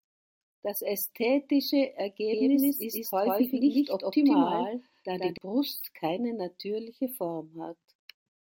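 From 2.32 s to 5.38 s the speech is accompanied by a doubled audio track: a second full-band copy trailing by around 150 ms at roughly the same level as the original. It sounds like a hard, slapback-style echo with no decay or room colour, and it appears and disappears abruptly, beginning just before "keine natürliche". The likely cause is the signal being captured a second time through a slower path and mixed back in.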